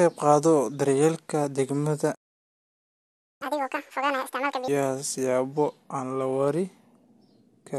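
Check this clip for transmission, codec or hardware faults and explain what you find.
Two linked playback faults affect this speech clip: a stall followed by a burst of sped-up catch-up.

Playback stall, 2.14 to 3.42 s. The speech cuts off mid-flow and the output falls silent for about 1.26 s. This is likely the player running out of buffered data, or its audio thread being blocked, so nothing reaches the output until it recovers. The gap is abrupt and long enough to sound like a dropout rather than a natural pause.

Catch-up at higher speed, 3.42 to 4.68 s. As soon as sound returns, the player races through its backlog by resampling at 2.0 times normal speed to recover the lost time. Because resampling raises speed and pitch together, the speech comes out hurried and chipmunk-like, lifted by about 10 semitones. At 4.68 s it drops back to normal rate and pitch.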